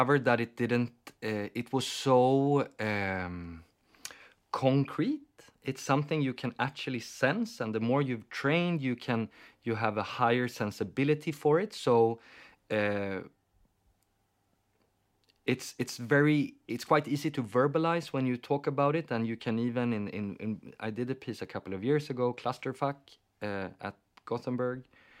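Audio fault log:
No faults detected anywhere in the speech audio.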